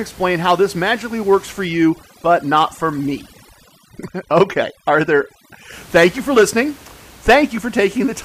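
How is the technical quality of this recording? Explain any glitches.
The main glitch here is heavy-handed processing in the middle of the speech, with the room noise sitting about 25 dB under the voice. From 1.65 to 5.72 s there's overdone noise removal: the reducer clamps bands near its noise estimate, so the background goes twinkly-silent and quiet parts of the voice drop out with it.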